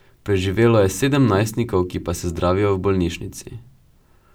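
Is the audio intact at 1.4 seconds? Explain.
Yes, the speech at 1.4 s plays through intact, with no dropout, click or other fault at that moment.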